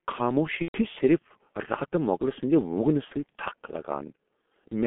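Throughout, the speech carries the signature of the G.723.1 codec. The band sits roughly between 200 Hz and 3.4 kHz, and heavy coding damage leaves it muffled and hoarse with smeared consonants, which fits the low-rate 6.3 kbit/s mode and its slow, 30 ms frame-by-frame model updates.

From 0.63 to 0.83 s, and again from 3.05 to 3.13 s, VoIP packet loss concealed by the speech codec takes over. The decoder repeats its last pitch and filter state at falling gain, so the sound is stretched into a buzzy tone or coloured noise that fades. The first gap suggests about four lost frames, the second about two.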